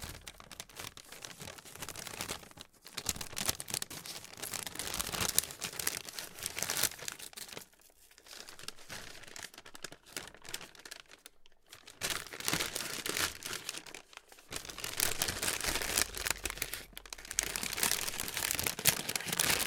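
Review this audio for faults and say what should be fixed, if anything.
Nothing here needs fixing; the sounds in the recording come through without any problem worth flagging.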